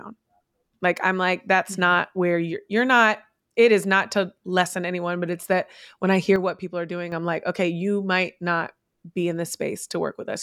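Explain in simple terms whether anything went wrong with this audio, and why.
A sudden gain jump hits the speech at 6.36 seconds. The level drops abruptly to noticeably quieter, with the speech and the background noise falling together, and stays down until 7.12 seconds, when it snaps back up just as suddenly. This was likely caused by a digital volume setting being switched instantly, from one sample to the next, instead of being eased in gradually, so the change lands as a step rather than a smooth fade.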